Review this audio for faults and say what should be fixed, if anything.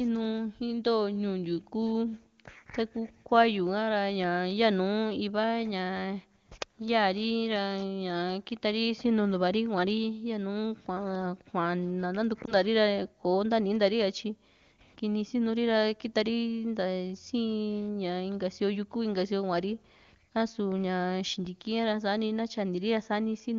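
At 12.45 to 12.55 s there's a lost AMR speech frame. A single 20 ms frame failed its checksum over the radio link, so the AMR-WB decoder reused the previous frame's pitch and vocal tract settings at reduced gain, and you hear a quick dip or warble. Improving radio coverage or channel protection on that link would stop frames getting corrupted like this.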